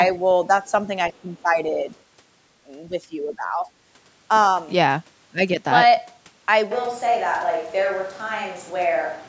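From 1.15 to 1.19 s a very faint scrap of a second voice comes through, far below the speech in level: the other side's voice leaking through, likely echo from a loudspeaker that the echo canceller did not fully remove. It is a separate voice, not a dip in the talker's own.

From 1.22 to 1.89 s and again from 2.88 to 3.68 s the speech itself sinks by up to roughly 10 dB. This is speech suppressed in double talk, likely the canceller turning everything down while both sides spoke. Unlike leakage, nothing is added; the talker's voice is taken away.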